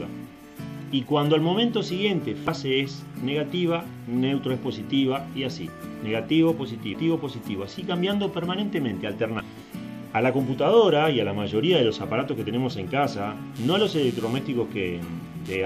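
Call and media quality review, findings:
Damaged data in the compressed stream: decoder misreads or drops corrupted frames and resyncs on the next header. Brief disruption at 2.44–2.48 s, 6.91–6.95 s and 9.37–9.41 s, each about 40 ms.

Computer activity noise: processor/graphics/mouse load shifting the shared audio ground. Buzzing pulse around 150 Hz, roughly 25 dB below the signal, from 13.56 s to the end, following machine activity rather than the audio.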